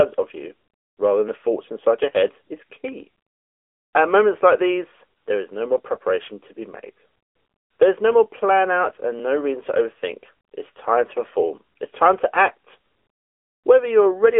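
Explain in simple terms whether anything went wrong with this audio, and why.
Something did go wrong, and it lasts the whole clip: the speech has been through an AMR narrowband mobile codec, the kind old 2G and 3G phone calls use. It throws away everything above about 3.8 kHz and squeezes the voice into roughly the 300 Hz to 3.4 kHz phone band, so it sounds thin and muffled. The codec rebuilds speech from a simplified model, which leaves a plainly audible synthetic, buzzy edge.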